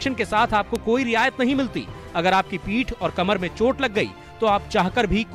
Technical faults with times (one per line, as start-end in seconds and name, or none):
0.76 bit error spike